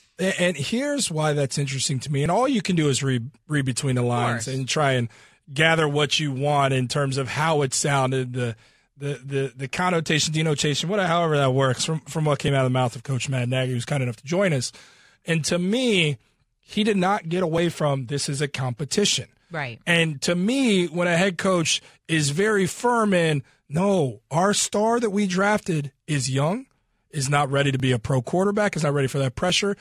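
No technical faults can be heard anywhere in this recording.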